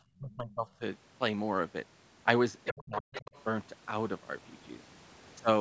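Echo cancellation on a call appears to have failed twice in this speech recording, with speech suppressed in double talk from 0.19 to 0.81 s and again from 2.71 to 3.31 s. The likely cause is the canceller mistaking the talker's own voice for loudspeaker echo while both ends spoke at once, so it pulled the whole microphone signal down. The talker's voice dips by roughly 30 dB in the first stretch, affected over about half a second, and by roughly 40 dB in the second, affected over about 400 ms. The same canceller also lets the other side's voice leak through, from 2.64 to 2.84 s and from 3.12 to 3.44 s, likely as residual far-end audio it failed to subtract from the microphone. These fragments sit around 10 dB and then 15 dB below the talker, heard as a second voice. The band is limited to about 8 kHz, as expected from the call's microphone processing.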